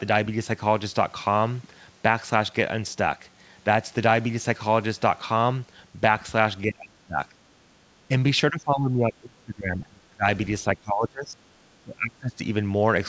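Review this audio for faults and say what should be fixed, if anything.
Speech suppressed in double talk: the speech dips by about 25 to 30 dB at 6.67–7.21, 8.51–10.26, 10.61–11.46 and 11.63–12.4 s, likely because the echo canceller attenuated the near talker while the far end was speaking. The G.722 call path at 64 kbps, with nothing above 8 kHz, plays no part in this. Tuning the echo canceller's double-talk detection to keep the near talker open while both sides speak would prevent it.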